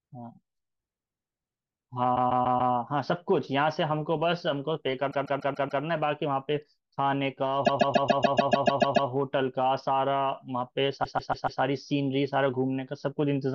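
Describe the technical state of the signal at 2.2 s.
At 2.2 s the signal is inside a stretch of repeated frames running from 2.15 to 2.73 s. A 144 ms block of compressed speech, a length that points to a run of about six codec frames, was delivered again and decoded four extra times. The same fragment therefore plays five times in a row as a mechanical stutter, and the passage runs 576 ms longer than it should.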